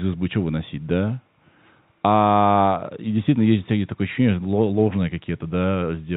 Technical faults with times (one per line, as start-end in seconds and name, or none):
none